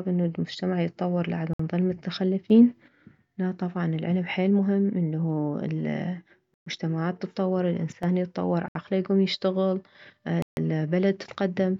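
This speech clip has four short dropouts to dead silence, at 1.53 s (60 ms), 6.54 s (124 ms), 8.68 s (68 ms) and 10.42 s (147 ms), with the talk carrying on afterwards. That's likely a Bluetooth stall, where interference delays packets and the headphone buffer runs dry until the resends arrive. There are also two sudden gain jumps: from 2.50 to 2.88 s everything leaps up about 6 dB, and from 7.92 to 8.03 s it drops about 10 dB. The voice and background noise shift together with no ramp, likely a digital gain change applied from one sample to the next.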